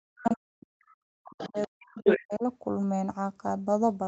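From 0.1 to 2.43 s the speech is suppressed in double talk: over roughly two seconds the talker dips and breaks up, at its deepest about 40 dB down. This is likely an echo canceller that couldn't separate near speech from loudspeaker echo and ducked both. Unlike a network dropout, the gaps follow the other side's activity rather than falling as clean, even cuts.

Within that stretch the other side's voice leaks through, at 1.27 to 1.67 s about 15 dB under the talker, then at 2.05 to 2.23 s roughly as loud. That is likely residual echo the canceller missed. A second voice overlaps the first, which sets it apart from simple background noise. Like the rest of the clip, it carries nothing above 8 kHz from the call path.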